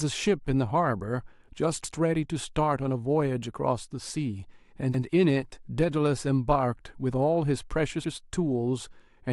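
At 4.94 s to 5.04 s, a 100 ms stretch of the speech plays twice, a stutter from overlapping chunks: with 3.0 s chunks, the next chunk began before the previous ended. Unlike a dropout, nothing is missing; the audio repeats rather than gapping.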